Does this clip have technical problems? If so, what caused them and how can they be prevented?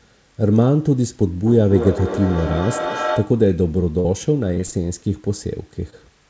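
Yes. A second device in the same room played the call back into an open microphone, creating a feedback echo between two devices: from 1.46 to 3.48 s the speech returns about every fifth of a second, thinning and ringing, peaking about 7 dB below the speech. Muting the second device's speaker and microphone, or using headphones, prevents it.

Packets reached the decoder too late, and the receiver filled the holes by extending the previous sound. This short concealed packet loss smears the sound briefly from 4.00 to 4.06 s (40 ms missing) and at 5.90 s (20 ms missing). A steadier network connection, such as wired instead of congested Wi-Fi, prevents it.

Loss then struck repeatedly, causing repeated packet loss (robotic sound). From 4.54 to 4.74 s, four gaps of up to 27 ms were patched, nearly 40% of that stretch, leaving a choppy sound. More network headroom or a deeper jitter buffer prevents it.

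The absence of anything above 8 kHz fits a G.722 wideband codec and is expected.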